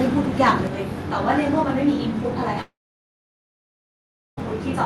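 Channel delay (comb filtering) begins at 0.67 s and runs to the end of the clip. One channel trails the other by roughly 20 ms, and when the two are summed to mono, the shared speech cancels at regularly spaced frequencies, starting at around 20 Hz. The result is a fixed pattern of notches that gives the speech a rough, slightly doubled colour, and it stays constant for the remainder of the clip.

A long network dropout, the likely cause of a gap from 2.61 s to 4.39 s, removes about 1.76 s of speech. The receiver briefly carries the last sound forward as a fading fill. Within about a tenth of a second that gives way to roughly 1.65 s of near-silence. Speech then resumes further along, with the lost stretch simply gone rather than delayed.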